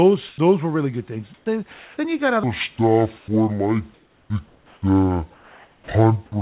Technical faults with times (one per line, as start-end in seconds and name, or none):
0.28-0.38 sound dropped by the voice detector
1.34-1.46 comfort noise in place of the background
1.74-1.98 sound dropped by the voice detector
2.43-6.42 section at the wrong speed
2.76-2.78 sound dropped by the voice detector
3.18-3.28 comfort noise in place of the background
3.94-4.82 comfort noise in place of the background
4.27-4.30 onset clipped by the voice detector
5.34-5.88 sound dropped by the voice detector